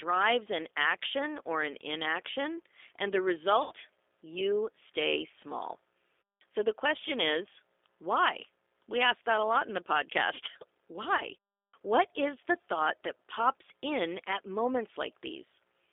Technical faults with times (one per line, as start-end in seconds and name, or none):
0.00-15.92 G.729 codec
3.63-3.73 VoIP packet loss concealed by the speech codec
11.17-11.22 VoIP packet loss concealed by the speech codec